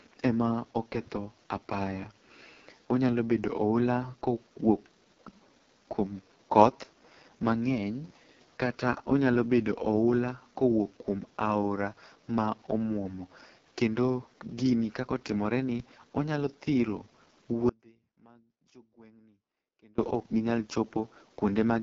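A speech recording that has passed through the AMR wideband (HD Voice) codec at a very low rate, and the damage is heavy. The speech sounds rough and raspy, which fits the lowest 6.6 kbit/s mode, where too few bits remain to model the vocal tract and its pulse excitation cleanly. On a spectrogram the energy stops at a hard ceiling near 7.3 kHz, and the top band above about 6.4 kHz looks like smeared noise without harmonic striations. From 17.69 s to 19.98 s there is an audio dropout to a faint residue lasting 2.29 s. The sound cuts off abruptly and returns just as suddenly, and throughout the gap only a faint trace remains, roughly 30 dB below the normal level. The waveform shows this as a sudden, nearly flat stretch with square edges, and the spectrogram shows a dim band bounded by sharp vertical edges. The likely cause is that the wanted signal was lost while the path after the break stayed live.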